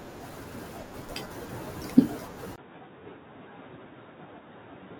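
At 0.82 s, damaged data in the compressed stream makes the decoder lose frame sync, leaving a brief glitch. From 2.56 s, the likely cause is the input switching to a poorer device: after a 20 ms silence, the sound turns dull and boxy, with nothing above 3.8 kHz, about 5 dB quieter, and new background noise roughly 40 dB down. Another corrupted-data blip occurs at 3.66 s.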